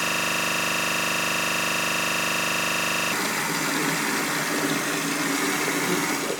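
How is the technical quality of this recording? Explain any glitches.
The recording has one serious fault covering roughly its first half.

From the very start to 3.12 s, a system hang loop is already under way. The playback system stalled while the audio hardware kept replaying the same ring buffer, so a single 40 ms slice of audio repeats exactly, about 77 times. At a 25 Hz repeat rate, this produces a rough, rapid stutter bordering on a low buzz rather than any continuous sound.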